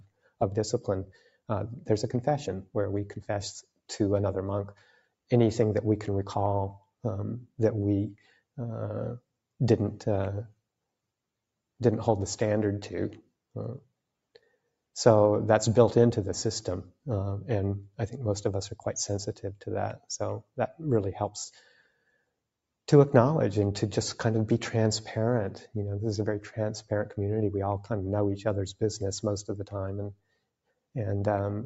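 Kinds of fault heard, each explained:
Noise suppressor applied to music or sounds: a noise suppressor built for speech stayed switched on for the whole clip and treats steady tones and ambience as noise. Its gain keeps shifting by a few decibels, so sustained parts pump and thin while attacks mostly pass.
Sound cut by the noise suppressor: the suppressor mistook certain passages for noise and pulled them down by about 20 to 22 dB, near 0.0–1.5, 2.65–5.31, 6.79–9.32, 13.22–14.75, 19.33–22.34 and 30.11–30.95 s, sinking held sounds and cutting decays short.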